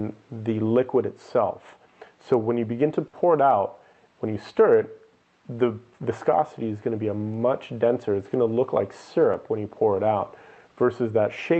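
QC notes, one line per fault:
3.07–3.16 s, burst of packet loss: about 60 ms of concealment extends and fades the preceding sound, then 60 ms of audio is skipped before playback resumes.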